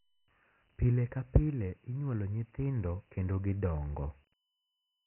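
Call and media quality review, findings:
Dialogic VOX ADPCM artefacts throughout. Speech band ends near 3.1 kHz, fitting a 6,000-sample rate. Gritty hiss tracks the speech. Heavy quantisation damage from 4-bit adaptive steps at 24 kbps. Component: Dialogic (OKI) ADPCM encoding stage, telephony storage path.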